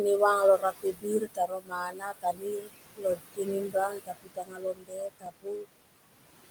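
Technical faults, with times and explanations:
Throughout: noise suppressor artifacts. Steady background noise is pulled down by about 20 dB in gaps and rises under the speech.
0.58 to 2.7 s, 2.93 to 3.49 s, 3.67 to 5.66 s: speech cut by the noise suppressor. Soft parts of the speech drop by up to about 22 dB and sound swallowed. Unlike the background pumping, the speech itself is lost here, roughly a second and a half in the first and third stretches and a fraction of a second in the second.
5.26 s: repeated buffer. A tiny slice of audio plays twice, heard as a brief click rather than a stutter, which fits a 128-sample buffer repeated once.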